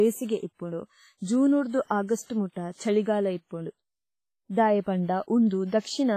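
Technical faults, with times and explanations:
Throughout, WMA compression: a transform codec likely running at a low bitrate, fitting about 24 kbps, zeroes weak lines and smears noise, so speech rings, washes and hisses, with nothing above 15.3 kHz.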